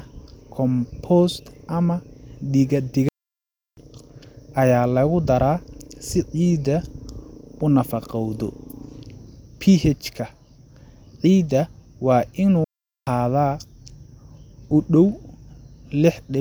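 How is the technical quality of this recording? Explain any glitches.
Two playback stalls break the speech. Playback stall, 3.09 to 3.77 s and 12.64 to 13.07 s just after "ciidda waa": the player likely ran short of data or was blocked, cutting sound mid-flow for about 0.69 s and 0.43 s before resuming.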